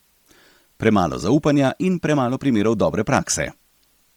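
Speech runs with two faults present throughout. A constant, even hiss sits roughly 40 dB below the speech, without distortion: low bit depth with dither, consistent with about 10-bit resolution where dither turns rounding error into steady white noise. The speech also carries a heavily breathy, grainy edge, with upper frequencies sounding noise-filled rather than detailed, and nothing above 20.2 kHz. This is likely Bluetooth LC3 compression at a low bitrate, fitting roughly 32 kbps with 10 ms frames.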